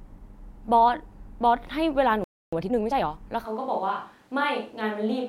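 At 2.24 s the speech stops dead. This playback stall lasts about 280 ms, until 2.53 s. The silence likely comes from the player running short of data or its thread being held up.

From 2.53 to 3.09 s comes a time-compressed catch-up. The player trims its backlog by removing small slices and cross-fading the joins. The speech runs about 1.5 times fast. Pitch stays normal.

At 3.46 s the sound changes abruptly. This is a switch to a distant microphone, likely because the close one dropped out. The voice turns roomy and hollow, with thinner bass. It is roughly 5 dB quieter. Room noise rises to around 35 dB below the speech. This lasts to the end.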